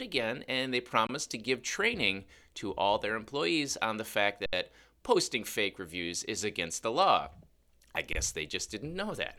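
Underrun with held sample at 1.07, 4.46 and 8.13 s: the output buffer emptied, so the converter froze on its last value. The sound flatlines for 23, 70 and 23 ms, then resumes where it stopped with only a soft edge.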